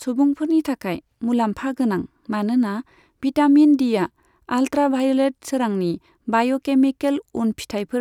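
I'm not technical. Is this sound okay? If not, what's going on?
Yes, nothing in this recording stood out as a problem when I listened.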